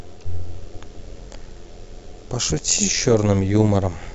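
Throughout the speech, overlap-add ripple makes the level pulse. The audio was split into windowed frames and rejoined with overlaps that do not sum evenly. The level swings by about 6 dB, around 100 times a second. It sounds like a metallic buzz with extra tones around the voice.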